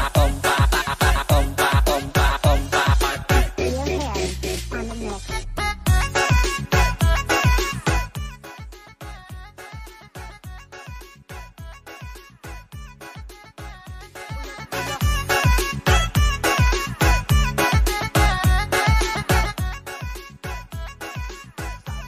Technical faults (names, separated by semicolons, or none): zipper noise